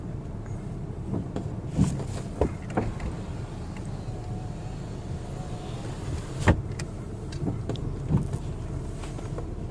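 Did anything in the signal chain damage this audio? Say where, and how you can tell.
No, none of the stages between capture and playback left any audible damage on this signal.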